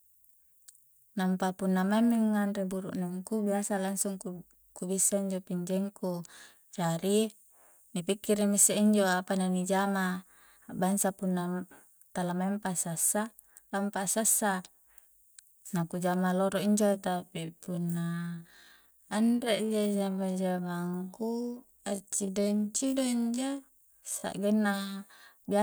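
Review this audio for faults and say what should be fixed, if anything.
Time-stretched section, 16.85 to 24.31 s, right after "jama loro injo": the speech slows abruptly to about 0.56 times its pace at unchanged pitch, likely from software repeating short pieces. To prevent it, re-record or re-edit to the needed length instead of stretching the audio.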